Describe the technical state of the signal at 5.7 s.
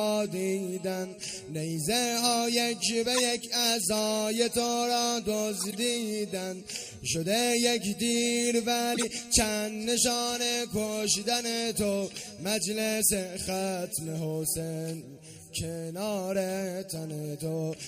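At 5.7 s a corrupt frame was decoded: bits in several consecutive compressed frames were damaged, and the decoder played them anyway. Misread gains and codes put energy at wrong frequencies from 5.59 to 5.75 s, heard as a brief chirp, squeak, blip or burst of noise peaking around -15 dBFS.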